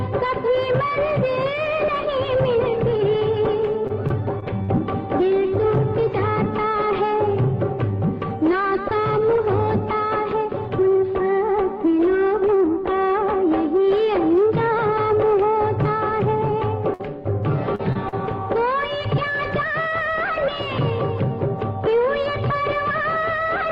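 From 3.87 to 4.70 s there is repeated packet loss, which gives a robotic sound. The stream drops out four times in under a second. Each hole is patched by carrying the last sound forward. The longest is about 41 ms. Roughly 100 ms of real audio is missing across the stretch, and about 13 percent of it is filler. The result is choppy and robotic, with small pieces gone.

At 16.94 to 17.01 s comes a burst of packet loss. About 60 ms of audio never arrived. The receiver stretched the previous sound to cover the gap, fading it as it went. This is heard as a brief held buzz or dying hiss. Then the sound jumps ahead, and the part in between is simply absent.

Three short concealed packet losses follow close together, at 17.75 to 17.81 s, 17.93 to 17.97 s and 18.09 to 18.14 s. Each drops 20 to 40 ms. The receiver filled each hole from the last sound's pitch or noise, then blended back into the real signal. 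Each one is a quick smear or wobble. Any brief sound falling inside a gap can vanish.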